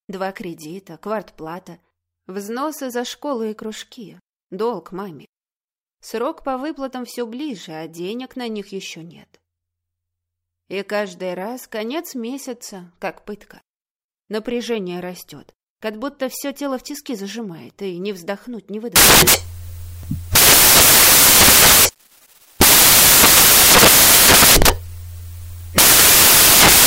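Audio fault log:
18.96 to 26.87 s, samples built from the wrong bytes: from 18.96 s to the end, the sound gives way to loud, harsh broadband noise. The bytes making up each sample are being combined incorrectly, through an offset of one byte, reversed byte order or a mismatched alignment. The rapidly fluctuating low-order bits end up as the most significant part of every value, so the output becomes harsh noise.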